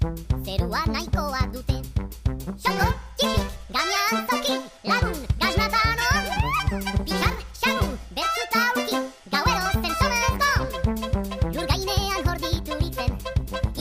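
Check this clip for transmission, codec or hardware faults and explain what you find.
There is one fault, present for the whole clip. Everything sounds sped up and raised in pitch, running half again as fast and about seven semitones sharp. This is a wrong sample rate: samples played faster than captured without conversion, which fits 32 kHz material played back at 48 kHz.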